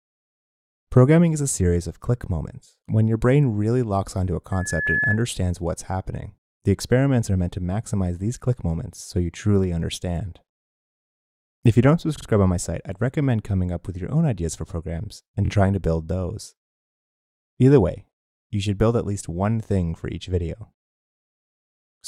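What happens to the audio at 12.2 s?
From 12.17 to 12.26 s there are repeated frames. A block of about 46 ms, which fits two compressed frames, plays twice more. The sound stutters. This adds 93 ms.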